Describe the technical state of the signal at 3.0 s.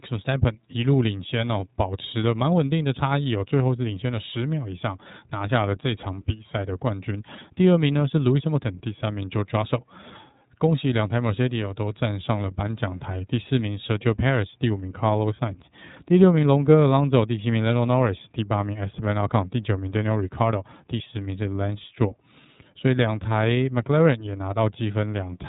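At 3.0 s you're hearing the iLBC codec, which runs through the whole clip rather than just this moment. Nothing above about 3.8 kHz comes through, so the speech sounds narrowband and boxed-in. There's also a plainly audible rough, slightly synthetic edge, because each block of excitation is coded on its own without borrowing from the one before. That texture fits iLBC's 30 ms frames at 13.33 kbps.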